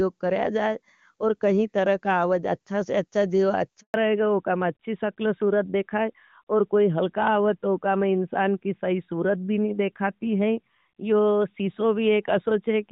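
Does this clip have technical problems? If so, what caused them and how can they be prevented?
Yes. A handover gap runs from 3.80 to 3.94 s: the speech fades within a few tens of milliseconds and stays silent for 140 ms while the call switches networks and no speech frames arrive. Whatever was said in that stretch is lost. It can be prevented by keeping the device on one stable network during recording, for example by disabling automatic network switching or staying in good coverage.

A fallback to narrowband follows at 3.94 s and lasts to the end. The clear, wideband HD Voice sound of the opening, which fits AMR-WB at around 23.85 kbit/s, gives way to a duller, rougher sound with nothing above 4 kHz, which points to the older AMR-NB codec at 12.2 kbit/s. It can be prevented by making sure both ends and the new network support HD Voice, so that the call keeps its wideband codec after the handover.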